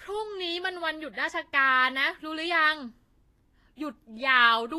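Right through the speech the treble sounds hissy and grainy, and nothing sits above 14.2 kHz. That's likely Vorbis compression at a low bitrate, around 32 kbps.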